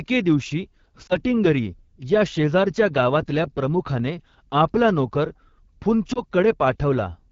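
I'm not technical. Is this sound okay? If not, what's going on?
No. Throughout, the speech sounds rough and raspy rather than clear. That comes from the AMR wideband (HD Voice) codec, the phone network's speech compression, running at one of its lowest quality settings, where it has too little detail to rebuild the voice cleanly.

There are also two brief wobbles, at 1.08 seconds and 6.13 seconds, each a quick dip or warble lasting about a tenth of a second. These are lost AMR speech frames. A radio error spoiled a tiny piece of the signal, so the phone filled the gap by repeating the previous sound more and more quietly. The shortness of each wobble points to a single lost frame.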